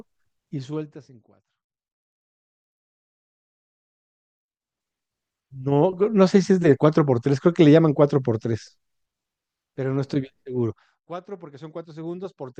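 There are no technical faults to describe in this speech clip.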